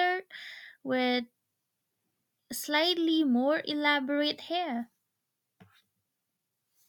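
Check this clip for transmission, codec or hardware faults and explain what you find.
No transmission, codec or hardware faults turn up in the recording; the signal stays continuous and intact throughout the speech.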